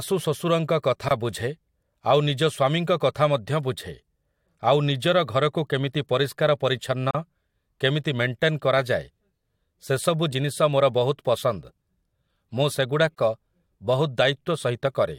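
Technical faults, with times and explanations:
1.09–1.11 s, 7.11–7.15 s and 13.15–13.18 s: gap at a join of encoded pieces. The speech cuts to silence for 23 ms, then 37 ms, then 37 ms. The gaps recur every 6 s. That spacing points to pieces about 6 s long, encoded one by one and butted together. Each encoder pass left its start-up delay and its padded final frame untrimmed. The codec smears the edges of the silence, so the silent part is shorter. The speech then continues from where it stopped.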